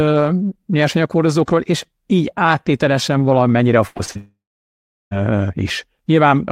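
From 3.87 to 4.17 s the speech breaks into repeated packet loss with a robotic sound. Four separate gaps fall inside this 0.3 s stretch, together removing about 160 ms of audio, with the longest at 84 ms. Each hole is filled by extending the preceding sound, so roughly half the span is synthetic continuation rather than real signal. The result is choppy and robotic, with fragments of speech missing between the patched sections.

At 4.17 s the trouble becomes a long network dropout lasting until 5.13 s, and about 940 ms of audio is gone. The last sound is first stretched into a fading buzz or hiss, then gives way to about 730 ms of silence. When the speech returns at 5.13 s, it picks up further on, and the lost section is never played. The likely cause is a stall in delivery long enough that the receiver stopped concealing and simply waited.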